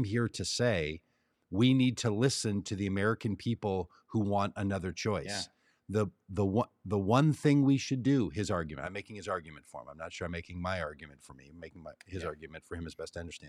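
Nothing in the speech recording stood out as a technical problem on listening.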